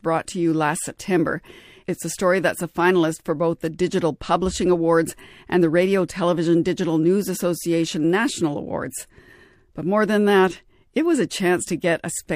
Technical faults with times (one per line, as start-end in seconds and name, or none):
none